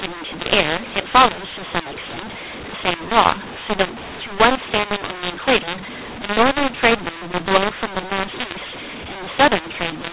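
A speech recording heard through a telephone channel. The band stops at 4 kHz, which fits 8 kHz G.711 coding. The clip has a mu-law and A-law mix-up from start to finish. The speech was coded with mu-law but decoded as A-law. The two logarithmic scales do not match, so sample levels come out scrambled. Some peaks grow too loud and others shrink. Quiet samples rise well above silence. The speech sounds harsh and distorted, and the pauses fill with noise.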